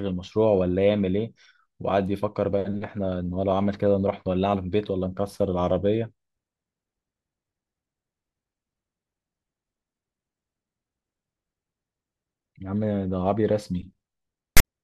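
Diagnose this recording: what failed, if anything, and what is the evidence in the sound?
A storage and playback failure: file tags played as audio. From 14.57 to 14.65 s, just before the clip ends, an 80 ms burst of loud, harsh rasp cuts in with hard edges, then drops to dead silence. The decoder has read a block of text tags and the zero padding after it as if they were samples. Text bytes become a lopsided rasp offset from zero, and the padding becomes flat digital silence. On a waveform this shows as a dense slab displaced from the centre line ending in a flat line. On a spectrogram it is a full-band vertical block with abrupt edges, followed by an empty gap.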